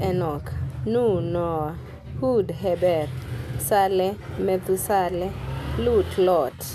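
Speech recording, no audible technical faults found.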